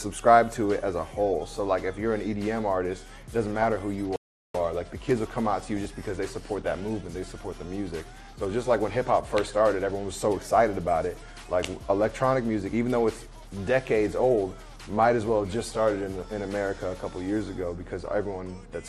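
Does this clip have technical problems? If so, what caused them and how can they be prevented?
Yes. Throughout the clip, a likely cause is MPEG Layer II (MP2) compression at too few bits, which fits roughly 80 kbps. Upper sub-bands get switched off and the remaining bands are coarsely quantised, so the audio sounds dull, with a granular, gurgling edge. Encoding at a higher bitrate, or with a more efficient codec, would prevent this.

From 4.16 to 4.55 s there is a playback stall, likely from the player's buffer running dry or its thread being blocked. The sound drops out for about 0.39 s and then resumes. A larger playback buffer and audio-thread scheduling that nothing can block would prevent it.

At 5.76 to 5.87 s and again at 13.84 s there is DAB burbling. Reception errors at a rate of a small fraction of a percent slipped past error correction and corrupted samples across several frames. 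Wrong samples put short blips of noise into single sub-bands. Better antenna placement or a stronger signal would prevent this.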